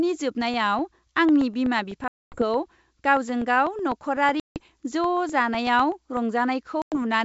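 From 0.41 to 6.17 s, periodic USB or driver dropouts cut roughly a millisecond of silence every 0.125 s, heard as steady ticks and seen as thin vertical gaps in the waveform. Packet loss on an ADPCM call leaves hard-edged silent holes at 2.08–2.44 s, 4.40–4.61 s and 6.82–6.98 s, blank columns on a spectrogram, and the speech resumes with brief distortion as the decoder's predictor recovers. The G.722 wideband coding still reaches up to 7 kHz.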